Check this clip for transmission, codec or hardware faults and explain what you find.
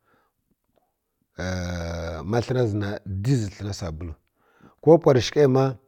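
I find no faults in this clip.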